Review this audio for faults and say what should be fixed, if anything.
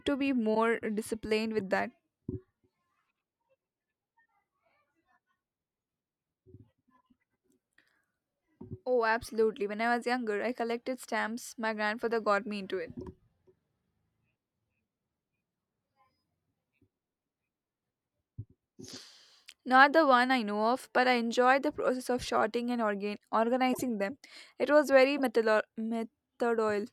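Corrupt frame decoded at 0.55–0.57 s, 23.73–23.83 s and 25.18–25.20 s: damaged compressed frames were played anyway, misplacing energy into brief noisy blips peaking near −20 to −25 dBFS. Prevent this by detecting bit errors and concealing or replacing bad frames instead of decoding them.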